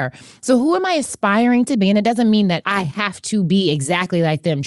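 From start to finish the speech carries a breathy, grainy edge. The upper frequencies sound hazy and hissy rather than crisp. Detail up there seems replaced by shaped noise. This points to Bluetooth LC3 compression, likely the cause. LC3 is the LE Audio transform codec. It codes short blocks and discards high-band content it cannot afford, then fills the gaps with noise. The damage here is plainly audible. It fits a 48 kbps stream in 7.5 ms frames.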